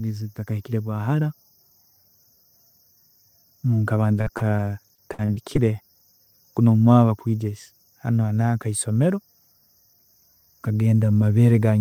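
From 4.13 to 5.79 s the speech suffers repeated packet loss, giving a robotic sound. More than a dozen short holes fall in quick succession, the longest 56 ms. About 290 ms of audio goes missing in all. Each hole is patched by stretching the last sound forward, roughly 280 ms of filler, about 17% of that span. The repeated patching makes the speech choppy, with pieces missing.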